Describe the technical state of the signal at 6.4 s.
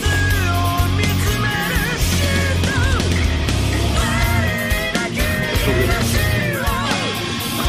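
At 6.4 s a repeated buffer occurs: fresh audio arrived late, so a tiny segment, consistent with a 128-sample buffer, replayed three extra times, producing a brief click-like buzz.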